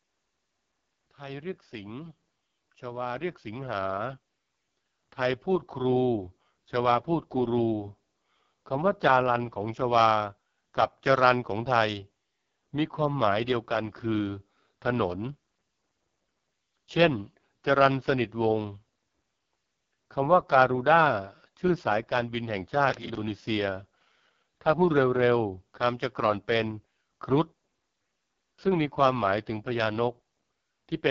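From the start the speech sounds rough and raspy with nothing above 7.5 kHz, the AMR wideband (HD Voice) codec at a low rate, which fits 6.6 kbit/s. Between 1.17 and 9.87 s voice and background swell together by about 14 dB as automatic gain rises, raising quiet input. From 22.90 to 23.21 s a gritty crackle tears through, a processor overload crackle: roughly ten buffers of around 10 ms each missed their deadlines and replayed old audio.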